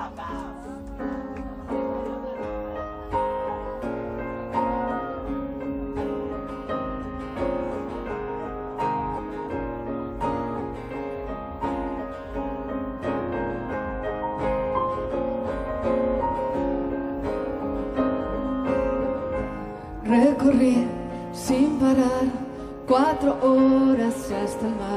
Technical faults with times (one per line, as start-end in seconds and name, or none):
13.17-13.20 compressed frames skipped
20.74-20.76 compressed frames skipped